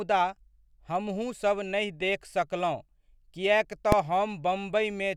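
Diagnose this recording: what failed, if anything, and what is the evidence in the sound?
A processing stage failed at 3.92 s, just after "नहि देख सकलहुँ किएक": invalid numbers at full scale. A calculation returned infinite values, pinning the output at full scale for about 1.33 ms, which fits a 64-sample block. Unlike an ordinary click or clipping, the block is too short to be heard as separate start and end pops, so it comes through as one very loud bang.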